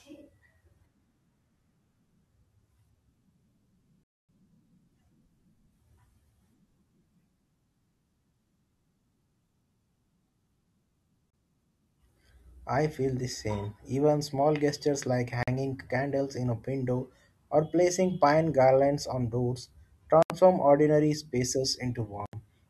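At 4.04, 11.30, 15.43, 20.23 and 22.26 s the speech cuts to silence for 253, 30, 46, 75 and 74 ms, then resumes where it stopped. This is likely a Bluetooth stall draining the headphones' buffer. Each gap shows as a flat waveform line and a blank spectrogram column.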